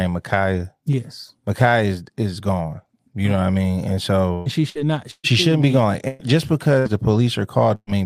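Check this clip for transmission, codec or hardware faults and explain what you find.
Yes, there are transmission faults: six bursts of packet loss in the second half of the speech. At 4.33–4.49, 4.70–4.78, 5.11–5.27, 6.08–6.22, 6.79–6.88 and 7.75–7.90 s the sound freezes into a brief held buzz or fading hiss, then jumps ahead. The receiver stretched the last sound over each gap, for about 55 to 125 ms, and 60 or 120 ms of speech never returns. At 5.11 and 7.75 s the fill fades to 40 ms of silence before playback resumes.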